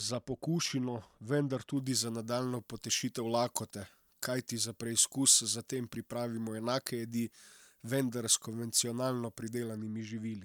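From 1.77 s to 9.77 s the speech turns thin, bright and hissy, with sharp sibilants. This is pre-emphasis left on: the treble lift, about 14 dB at 10 kHz, fits a 75-microsecond FM curve whose matching de-emphasis cut was never applied.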